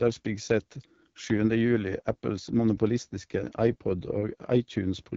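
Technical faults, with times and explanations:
Throughout: AMR wideband (HD Voice) codec. The speech is plainly rough and raspy, with nothing above 7.5 kHz. A pulse-excited vocal tract model this sparse, with synthetic noise filling the top band, points to one of AMR-WB's lowest modes, around 8.85 kbit/s.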